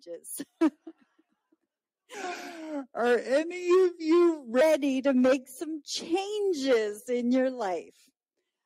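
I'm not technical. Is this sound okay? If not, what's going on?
No. The sound has three related timing problems.

All the way through, the audio has small, uneven hiccups and a slightly unsteady pace. The cause is clock drift between sender and receiver. The device that sent the sound keeps time about 3 percent slower than the device playing it. The two clocks never quite agree, so the playback side keeps running short of sound and has to patch the gaps, and it never settles.

Those patches are repeated timing corrections, and they run from about 0.12 s to the very end. The player keeps stretching the sound by repeating tiny slivers so it can keep up with the slower sender. The result plays at about 97 percent of normal pace. Each correction is small, but they come at irregular moments, so the rhythm feels faintly lumpy.

From 2.14 s to 4.61 s there's a more obvious change. The sound drops noticeably deeper, by roughly four semitones, and plays slower, at about 0.82 times normal speed. 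The pitch and pace shift together and then snap back. This is a section at the wrong speed, likely caused by a player or editing step applying the wrong clock to that stretch.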